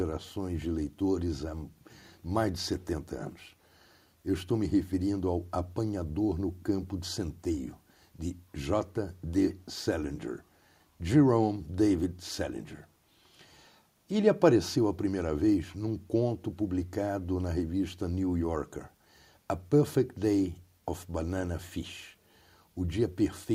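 No technical faults can be heard anywhere in this recording.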